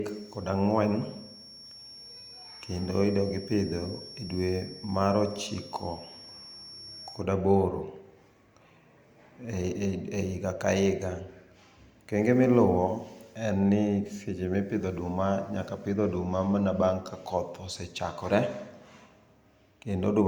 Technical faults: feedback whistle

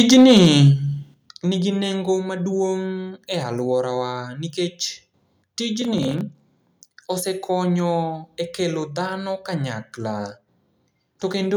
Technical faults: microphone overload; microphone volume stepped down; processor overload crackle

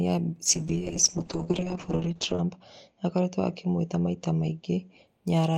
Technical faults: call bitrate drop

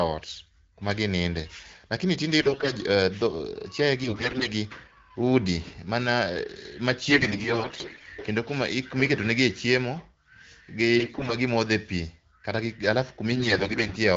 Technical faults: AMR bit errors

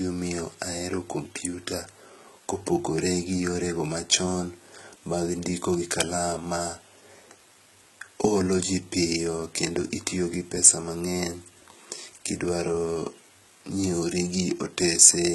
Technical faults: HE-AAC compression

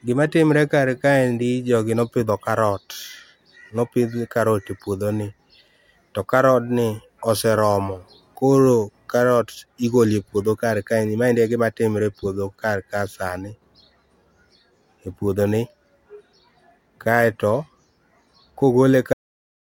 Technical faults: cut-off end

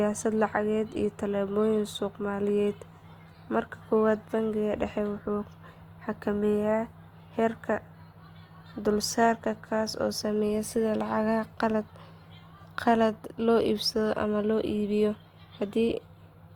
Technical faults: Opus compression

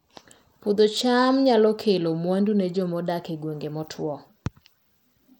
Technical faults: Bluetooth SBC compression

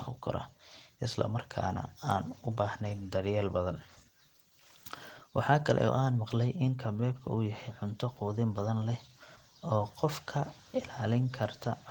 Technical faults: Opus voice compression

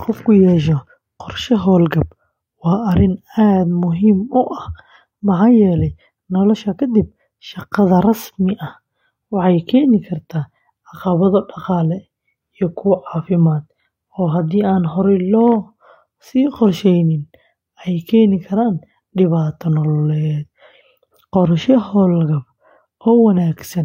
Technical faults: none

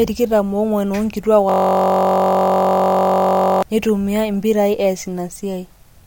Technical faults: system hang loop

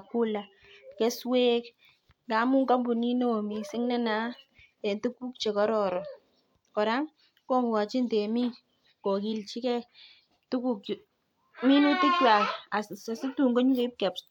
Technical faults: none

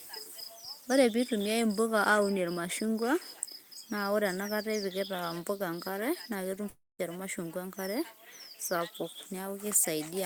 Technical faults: long network dropout

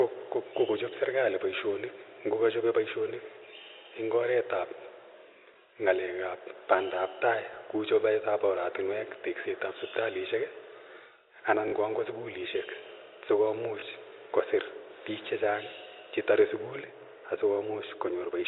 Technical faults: packet loss with last packet repeated

